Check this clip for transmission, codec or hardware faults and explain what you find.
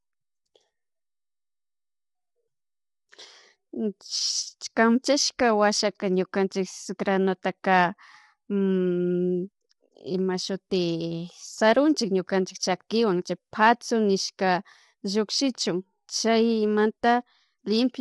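One fault runs through the whole recording. Low-delay AAC compression, throughout: the speech sounds rough and grainy, with noise between the harmonics and nothing above 11.6 kHz. The likely cause is AAC-ELD at a rate that fits about 32 kbps, whose short frames blur the pitch structure.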